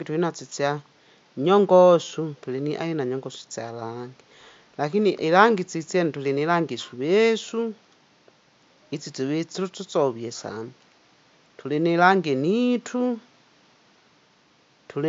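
No technical faults can be heard in the speech, and the only background is the room's own ambient noise, sitting about 37 dB below the voice.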